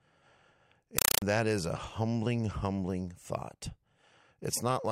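At 0.98 s the speech gives way to a compressed stream played as audio, lasting until 1.22 s. An AC-3 bitstream, consistent with a 192 kbps Dolby Digital stream, was passed through as if it were PCM samples rather than being decoded. It sounds like harsh, loud chattering static. On a waveform it shows as noise bursts about 4 ms long, separated by flat zero padding and repeating at 31.25 Hz. A spectrogram shows broadband vertical stripes at the same rate.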